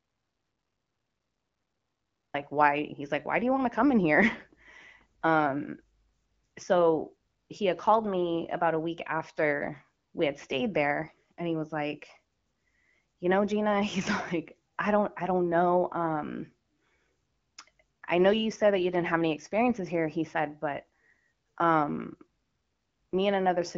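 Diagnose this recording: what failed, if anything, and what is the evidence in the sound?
The input feed was likely lost before the recording began, through a dropped link or disconnected source, while the encoder kept writing silence. This audio dropout to silence runs from the start to 2.34 s: dead silence with no room tone, then speech cutting in mid-flow.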